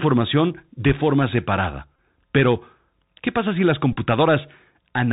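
A speech clip that has clearly been through the Bluetooth CVSD headset codec. Nothing above 4 kHz survives, the s sounds come out scratchy, and there's a grainy hiss under everything, which fits a 64 kbps narrowband headset link where the one-bit delta step can't keep up with sharp high-frequency detail. There's also Bluetooth headset packet repetition in two places. Right after "de forma separada", from 1.96 to 1.98 s, about 22.5 ms of audio is replaced by the previous packet decoded again, giving a brief buzzy stutter. Just after "pasa si las", from 3.93 to 3.97 s, about 33.8 ms is lost in scattered pieces, the longest run around 20 ms, and it sounds like a rough buzz near 267 Hz. That buzz comes from the same packet repeating every 3.75 ms.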